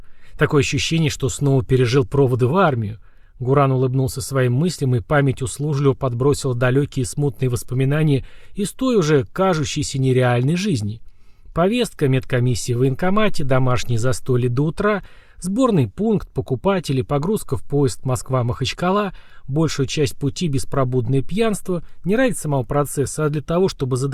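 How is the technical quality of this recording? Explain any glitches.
No technical glitches can be heard anywhere in the recording, so the signal stays intact and steady throughout.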